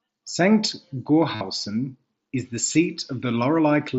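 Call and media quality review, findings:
Concealed Bluetooth headset packet loss at 1.35–1.41 s (buzzy held tone, warble on recovery; about seven lost frames) and briefly at 2.73 s after "is the"; receiver repeated recent waveform.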